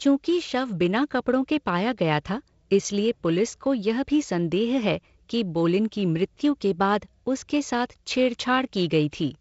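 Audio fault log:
No fault to log for this speech clip.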